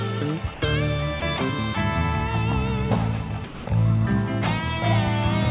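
At 0.54 to 0.62 s the sound stops for 80 ms and steady comfort noise takes its place. A second gap of 20 ms follows at 1.20 to 1.22 s. The longest comes at 3.44 to 3.66 s, about 200 ms. Each time the sound returns. This is likely sound dropped by the voice detector, which judged the audio to be background and stopped sending it. Throughout, nothing reaches above 4 kHz, which fits a narrowband call codec.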